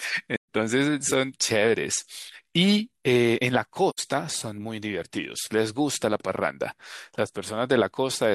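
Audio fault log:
0.36–0.48 s, AAC frame loss with muting: a gap of about 128 ms, which fits three lost frames, where the decoder zeroed the spectrum. The overlapping windows fade the speech out and back in, so the hole has soft edges. On a spectrogram it is a clean vertical blank band across all frequencies; the waveform tapers smoothly to flat silence and rises again.
3.90–4.00 s, AAC frame loss with muting: a shorter hole of about 85 ms, consistent with two lost frames, muted the same way. The same tapered fade-out and fade-in leave a narrower full-band blank column on the spectrogram and a smoothly enveloped flat stretch in the waveform.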